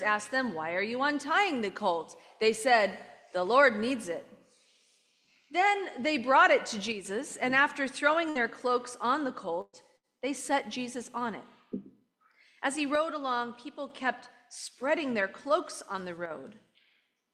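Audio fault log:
6.92 to 7.05 s, one channel drops out: the sound falls abruptly by about 6 dB for a moment, then returns. The likely cause is one stereo channel going missing before the mono sum.
12.95 to 13.90 s, one channel drops out: the same 6 dB dip, held for nearly a second. Anything present in only that channel vanishes too.
16.26 s, one channel drops out: a brief 50 ms dip of about 6 dB.
8.29 to 8.38 s, burst of packet loss: about 60 ms of audio is missing. The receiver fills the gap with 58 ms of the last sound, fading as it goes. Playback then resumes further on.
9.61 to 9.76 s, burst of packet loss: 120 ms is missing. The fill lasts 118 ms and ends in 20 ms of silence before the audio picks up again.
9.97 to 10.06 s, burst of packet loss: another 60 ms gap, covered by a 61 ms fading fill.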